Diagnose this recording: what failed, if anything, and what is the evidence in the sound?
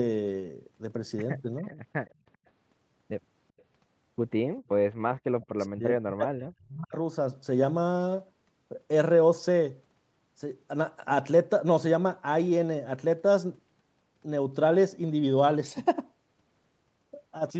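Two short, faint ghosts of the speech appear at 1.69 to 1.74 s and again at 2.06 to 2.14 s. Each is a copy trailing the original by about 395 ms, sitting roughly 25 dB and then 35 dB below the direct sound. This is an echo leak in the call processing stage, likely from a far-end loudspeaker whose echo canceller failed to fully subtract what its microphone picked up, so residual fragments returned down the line.

Between 5.41 and 6.95 s the speech dips, falling at worst by around 40 dB, with about a second of that span affected in total. This pattern is speech suppressed in double talk, again at the call processing stage. It is likely caused by both parties speaking at once, leaving the echo canceller unable to tell the near talker from loudspeaker echo, so it attenuated everything.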